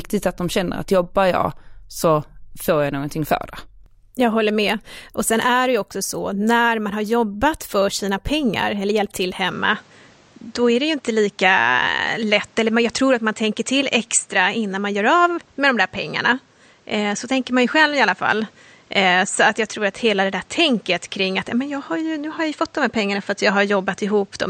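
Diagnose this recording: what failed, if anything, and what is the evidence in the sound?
The input was likely switched to a poorer device at 9.51 s, just after "pengar eller hjälpt till". From there to the end, the speech loses everything above 8.7 kHz and sounds duller. A new noise floor sits roughly 35 dB down, with no gap or level jump.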